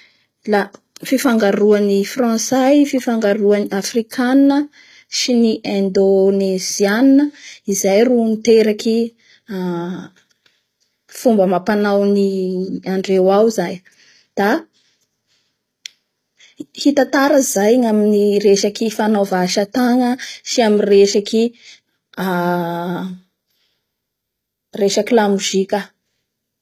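HE-AAC compression runs through the whole speech clip. It is likely the cause of gritty, metallic sibilants and a synthetic treble: the upper band is rebuilt from copied lower bands rather than coded, and the damage fits a bitrate around 20 kbps.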